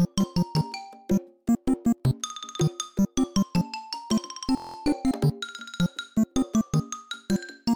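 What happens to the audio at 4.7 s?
At 4.7 s the sound locks into a rigid, mechanical buzz, a coarse drone at about 43 Hz that runs from 4.57 to 4.76 s before normal playback resumes with essentially nothing missing. This is a system hang loop: the machine or its audio driver stalled while the sound hardware kept replaying the same 23.2 ms slice of its ring buffer, which fits a 1024-sample buffer. That slice repeats eight times, and the exact repetition at that rate is what produces the buzz.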